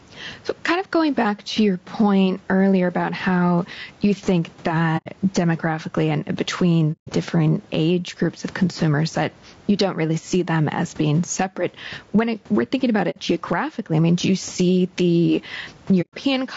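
This speech recording likely passed through an input gain set far too high, with a fast limiter clamping it on every loud syllable, producing gain pumping: a swing of around 10 dB that squashes the dynamics, with the room noise sitting about 36 dB below the speech. The encoding was likely low-delay AAC compression, AAC-ELD at a low bitrate near 32 kbps. Its short frames blur pitch harmonics, leaving the voice rough and grainy with noise between harmonics and a lowered or synthetic top band. AAC frame loss with muting follows where the decoder zeroed missing frames, fading the sound out and back in. This happens at 4.97 to 5.08 s, at 6.92 to 7.10 s after "demographically and", at 13.10 to 13.18 s between "it we're thinking about" and "geographically I mean do", and at 16.01 to 16.14 s after "do you see the".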